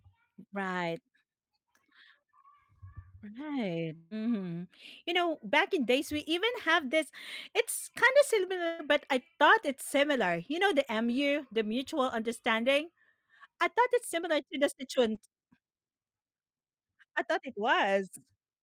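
A long network dropout runs from 3.95 to 4.14 s. About 160 ms of speech is missing, and the gap is filled with a smeared continuation of the preceding sound that fades out without reaching silence. The likely cause is a stretch where no packets arrived.

A burst of packet loss follows at 8.67 to 8.82 s, between "kind of" and "but I thought it's". About 120 ms of consecutive audio never arrived in time. The receiver extended the last sound as a decaying buzz, and speech then resumes with that portion gone.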